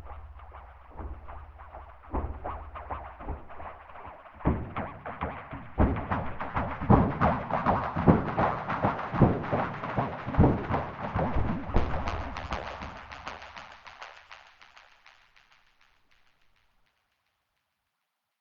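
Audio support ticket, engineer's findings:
Damaged data in a compressed stream, 6.74–6.79 s: brief disruption of about 50 ms in the everyday sound. Probable component: decoder input. Corrupted bytes in the stream leave frames unreadable, so the decoder drops sync and hunts for the next valid frame header.

Damaged data in a compressed stream, 16.86 s: shorter event, under 20 ms. Same mechanism: a bad stretch of compressed data causes a decode failure and resync at the next frame boundary.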